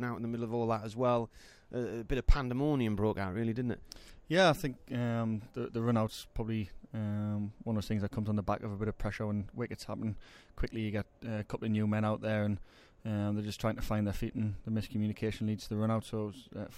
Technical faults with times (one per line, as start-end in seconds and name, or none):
none